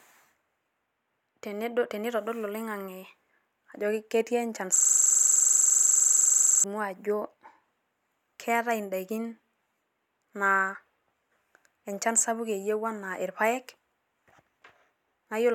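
From 4.76 s to 6.64 s the speech stops moving forward and turns into a rapid, rattling buzz. A single 42.67 ms slice repeats about 23.4 times per second, 44 times over, before normal audio resumes. This is a system hang loop. The computer or audio driver stalled, and the sound hardware kept replaying the same stretch of its ring buffer. The loop length fits a 2048-sample buffer.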